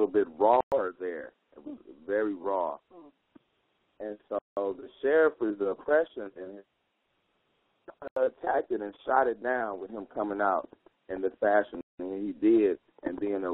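Bluetooth stalls at 0.61, 4.39, 8.08 and 11.81 s: the sound drops to silence for 113, 182, 89 and 184 ms, then resumes. This is likely packets delayed by radio interference, draining the headphones' buffer until retransmissions arrived.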